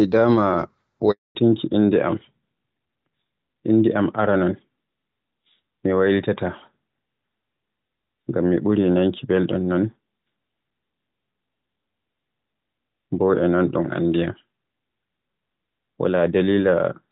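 At 1.11 s there's a handover gap. The call jumps between networks and no speech frames get through, so the sound dies away within a few tens of milliseconds and stays silent for 240 ms, until 1.35 s. Whatever was said then is simply lost.

From 1.35 s to the end you get a fallback to narrowband. Before the gap the audio has the clear, lightly coded quality of HD Voice at around 12.65 kbit/s. Afterwards nothing above 4 kHz remains, which fits AMR-NB at 12.2 kbit/s, and the voice turns duller and rougher.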